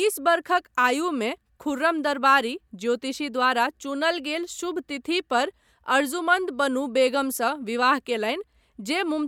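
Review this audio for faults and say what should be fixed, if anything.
Nothing to fix; no audible faults in this speech recording.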